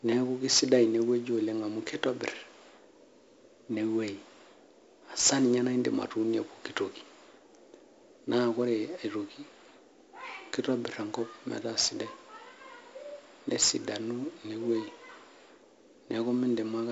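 From start to finish the speech carries the grain of 4-bit ADPCM compression. Each sample is coded as a coarse 4-bit step from a predicted value, so the quantisation error forms a broadband hiss that rises and falls with the speech level, and the damage here is heavy. Sharp onsets smear and distort where the adaptive step lags. Nothing is present above 7.7 kHz, which fits a 16 kHz sample rate and a 64 kbps stream.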